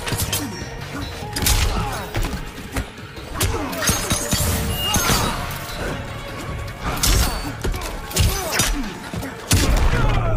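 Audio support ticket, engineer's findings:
Audio missing between chunks at 1.39, 3.35, 5.30, 7.26 and 9.22 s. Short skips, each dropping about 40 ms, with the two sides of each gap butted together and no silence between them. The even spacing of about 1.96 s in the output fits 2.0 s capture chunks, each shortened by the lost piece. Likely cause is the recorder or processor buffering layer losing samples while it closes one chunk and opens the next.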